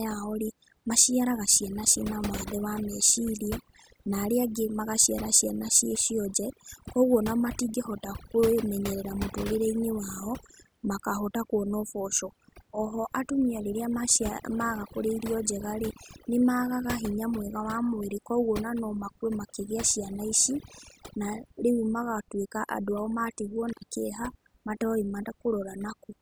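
Overdone noise removal runs through the whole of this speech recording. The noise reduction was set so aggressively that any frequency band sitting close to its estimate of the background noise is pushed far down or switched off entirely. Quieter parts of the voice fall below that threshold and get removed along with the noise. The background drops to near silence speckled with twinkling fragments. An intermittent contact breaks the signal from 23.67 to 23.87 s, right after "ao matigwo". A loose cable or plug momentarily opens the line, and the sound cuts out for about 89 ms with crackle at both edges of the gap, leaving faint hiss while the connection is broken.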